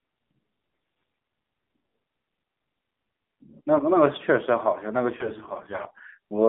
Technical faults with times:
0.00-6.48 AMR narrowband mobile codec
0.70-1.22 AMR bit errors
5.18-5.93 AMR bit errors

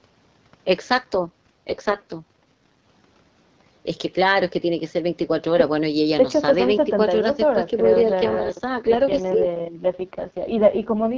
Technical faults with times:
1.23-2.85 AMR rate drop
8.04-11.18 AMR rate drop

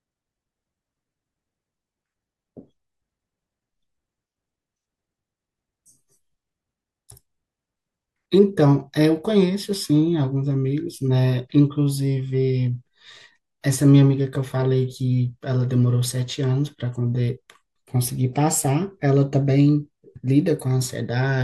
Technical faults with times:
none

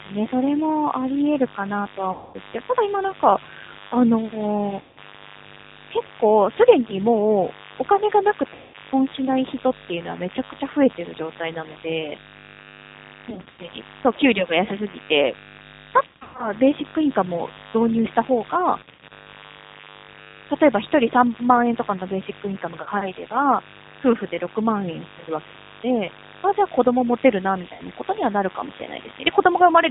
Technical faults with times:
0.00-29.90 mains buzz
0.00-29.90 G.729 codec
2.12-2.37 VoIP packet loss concealed by the speech codec
4.81-4.98 VoIP packet loss concealed by the speech codec
8.54-8.76 VoIP packet loss concealed by the speech codec
13.30-13.59 VoIP packet loss concealed by the speech codec
16.07-16.52 VoIP packet loss concealed by the speech codec
18.83-19.12 VoIP packet loss concealed by the speech codec
22.82-22.89 VoIP packet loss concealed by the speech codec
27.73-27.83 VoIP packet loss concealed by the speech codec

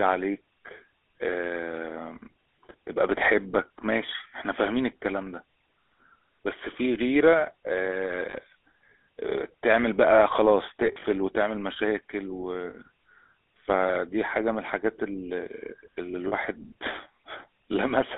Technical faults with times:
0.00-18.18 GSM full-rate codec
8.30-8.35 lost GSM frames
10.86-11.04 lost GSM frames
12.70-12.75 lost GSM frames
16.28-16.34 lost GSM frames

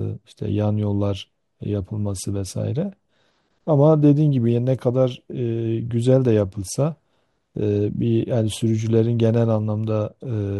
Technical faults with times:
none

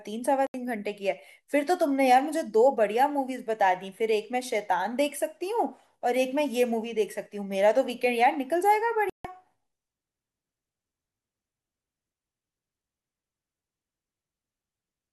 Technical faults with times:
0.47-0.54 Bluetooth dropout
9.10-9.25 Bluetooth dropout

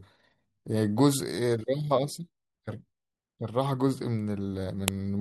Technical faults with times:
4.88 file header played as audio

